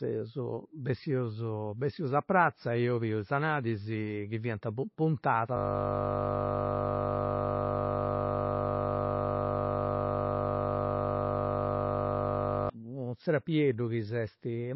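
From the start, the speech carries what is likely MP3 compression, plainly audible throughout. Nothing survives above 5.5 kHz, so the treble stops at a hard ceiling, and the remaining band sounds watery and swirly, with sibilants turning to metallic chirps. That swirl is what separates it from a simple low-pass filter, which would dull the top without the shifting texture. The damage fits a very low bitrate, around 24 kbps, where the encoder drops weak frequency lines that then flicker in and out between frames.

From 5.57 to 12.70 s a system hang loop takes over. The playback path froze while the audio hardware kept replaying the same 20 ms of its buffer, hundreds of times in a row. Because the repeated piece is so short, it doesn't come across as a stutter. Instead it becomes a steady, pitched buzz at 50 Hz, the loop rate. A dropout would fall silent and a glitch would pass in an instant, but this buzz holds unchanged for about seven seconds before the sound resumes.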